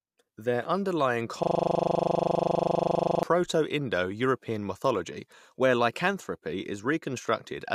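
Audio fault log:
1.43–3.23 s, system hang loop: the speech stops and a single 40 ms slice repeats about 45 times, cycling at 25 Hz, producing a rough mechanical buzz. The computer or driver has frozen while the sound hardware keeps replaying the same stretch of its ring buffer. On the waveform, the same short shape tiles evenly for 1.8 s. The spectrogram shows rigid vertical striping every 40 ms, with harmonic lines spaced 25 Hz apart.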